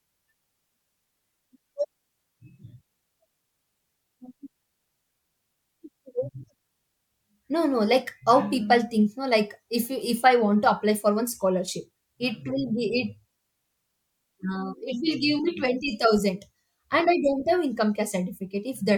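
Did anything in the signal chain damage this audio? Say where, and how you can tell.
No, nothing in the signal chain damaged this speech.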